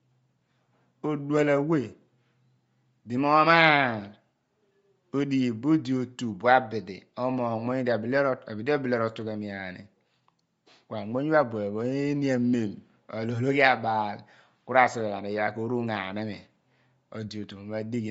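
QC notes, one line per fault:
Throughout, Bluetooth LC3 compression: the speech has a breathy, grainy edge, with nothing at all above 7.7 kHz, so the top end sounds cut off. This is likely LC3 coding at a low rate, which fits about 32 kbps with 10 ms frames. The codec discards much of the upper spectrum and fills the gaps with shaped noise, producing that rough sheen, while its bandwidth limit sets the hard ceiling near 7.7 kHz.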